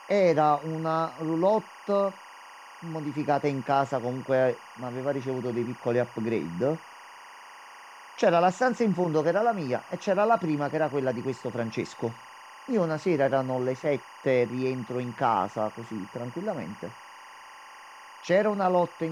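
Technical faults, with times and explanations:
Throughout, timecode bleed: linear timecode leaking in from a neighbouring track or cable adds a chirping warble about 20 dB below the speech, flipping between tones near 1 kHz and 2 kHz at a rhythm that fits 24-frame code. On a spectrogram, two steady bands sit behind every phrase and pause.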